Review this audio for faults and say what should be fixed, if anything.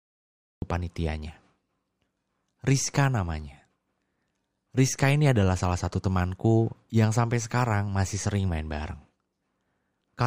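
The speech bursts in abruptly at 0.62 s, already mid-sound, after about 0.62 s of dead digital silence with no natural onset or fade-in. This is a cut-off start: capture began late, so the opening of the utterance was never recorded, and the first audible sample lands partway through it. Start recording before the talker begins, or keep a short pre-roll buffer so the leading audio is preserved.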